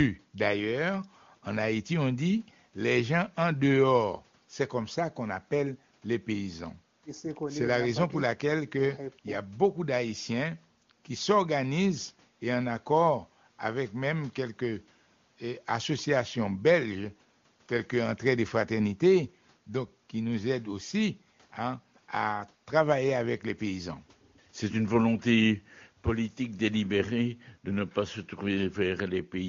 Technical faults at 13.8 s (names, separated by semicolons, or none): none